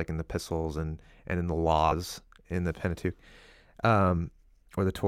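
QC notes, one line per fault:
1.91–1.93 s, compressed frames skipped: the speech jumps ahead by roughly a tenth of a second, which fits about four lost frames of 23.2 ms each.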